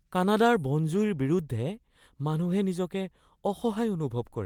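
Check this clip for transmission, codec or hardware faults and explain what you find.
Nothing in this speech recording points to a transmission, codec or hardware fault.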